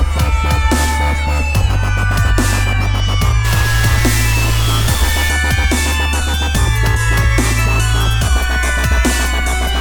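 From 3.45 s to 5.29 s the audio turns harsh and buzzy, and quiet stretches fill with noise. This points to a stuck bit, likely a data line held at a fixed value, offsetting about half the samples by a step of around -20 dBFS.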